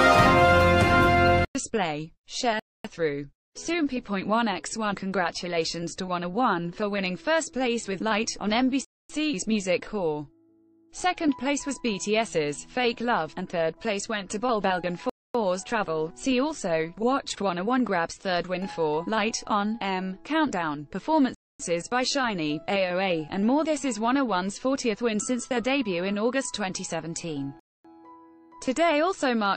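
At 2.60, 8.85, 15.10, 21.35 and 27.60 s the sound stops for 250 ms: a gap between chunks. The audio arrives in 6-second chunks, so silence is inserted at every join while nothing is lost.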